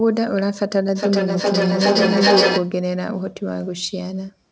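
From 0.95 to 2.77 s, feedback echo between two devices: the speech loops back about every 0.4 s, growing thinner and ringing, peaking about 4 dB above speech.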